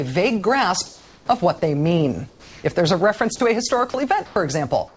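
Audio that passed through a call path with nothing above 8 kHz, which fits a G.722 codec. Comfort noise in place of the background is heard at 0.86–1.28, 2.30–2.64, 4.26–4.36 and 4.88 s to the end. There, the textured background turns steady and featureless, about 1 to 4 dB quieter. This is likely discontinuous transmission filling pauses with synthetic noise. Sound dropped by the voice detector occurs at 3.36–3.40 and 3.90–3.94 s. Brief sound is lost, about 30 ms and 20 ms, and steady noise fills the gap, likely because the detector mistook it for background.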